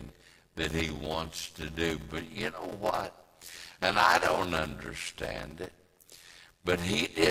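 A block size mismatch (padded) throughout: each short written block is zero-filled to fit what fits a 512-sample read, adding an 86.1 Hz buzz and slowing speech to 0.625× with its timbre kept.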